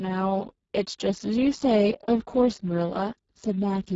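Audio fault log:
throughout: Speex codec, heavy damage fitting roughly 6 kbps; a starved excitation leaves the speech noisy and hoarse. The spectrogram shows smeared harmonics, noise-like fill above 4 kHz, and nothing above 7.7 kHz.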